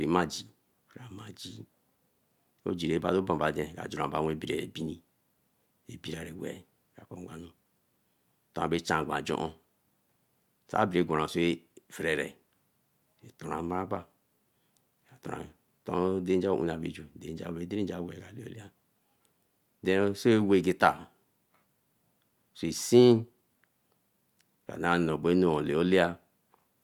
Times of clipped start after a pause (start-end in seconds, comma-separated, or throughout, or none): none